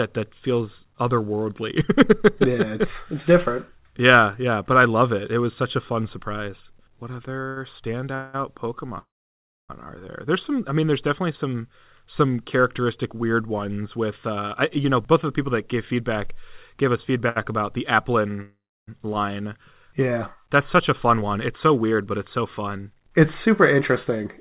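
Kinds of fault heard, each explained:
Repeated stalls (stutter): between 7.26 and 8.36 s the audio stops and resumes three times as packets arrive late, the jitter buffer running empty on each occasion. The receiver fills every gap by continuing the last sound, about 268 ms of fill in total, with the longest wait 188 ms. Nothing is lost, but roughly a quarter of that stretch is filled-in sound, so the speech drags and stutters.
Call audio freeze: twice the audio halts and later resumes where it stopped. From 8.98 to 9.71 s a 704 ms gap is inserted, of which 630 ms is silence. After "about the", from 18.42 to 18.89 s, a 457 ms gap holds 300 ms of silence. The likely cause is packets held up in transit, emptying the jitter buffer; the receiver extends the last sound, lets it fade out, then waits, losing nothing.
Jitter buffer speed-up: after "characteristic weird ones with", from 14.29 to 15.94 s, and again from 20.73 s to the end, the speech runs at 106% speed with its pitch unchanged, so it sounds hurried. 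The receiver is draining excess buffered audio by repeatedly cutting out short pitch-period pieces, about a tenth of a second in the first stretch and about two tenths in the second, to bring its delay back to target.
Short stall from a late packet: after "gave us", at 17.29 to 17.38 s, one packet is not ready when due and the jitter buffer briefly runs dry. The receiver stretches the last sound by 68 ms until the packet arrives, then resumes from the same place before "about the". Nothing is missing; the effect is a single sound held slightly too long, adding 68 ms of delay. The call path's G.711 coding leaves nothing above 4 kHz.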